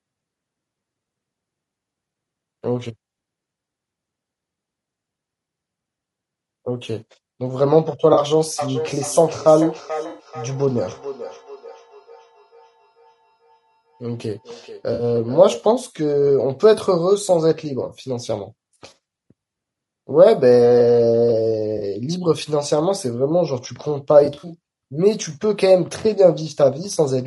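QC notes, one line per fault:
Throughout: low-delay AAC compression. The voice sounds rough and grainy, with noise filling the gaps between the harmonics and a thin, synthetic top band. The damage is plainly audible. Short codec frames resolve pitch harmonics poorly and spend bits less efficiently. At a low rate, the coder cannot keep the voice clean. The sound is likely from AAC-ELD, the video-call codec, and fits a bitrate around 32 kbps.
8.59 to 15.67 s: feedback echo between two devices. Each phrase comes back again at a fixed interval of roughly 0.4 s. The repeats are thinner and more ringing than the direct voice. At their loudest they sit about 14 dB below the speech. A second device in the same room replays the call, and the first microphone picks it up again. Its own echo canceller cannot remove sound it did not play, so the loop keeps returning.
8.13 s, 10.09 to 10.27 s, 14.93 to 15.03 s, 21.77 to 21.83 s, 24.25 to 24.52 s, 26.93 to 26.96 s: AAC frame loss with concealment. 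Each gap sounds like a short smeared, noisy or phasey patch. The losses last 40, 100, 60, 40, 120 and 20 ms. At 24.25 s the loss is scattered over about a quarter second, in runs of about 40 ms at most. The decoder rebuilds missing frames from the last good spectrum, which fits losses of one to six frames.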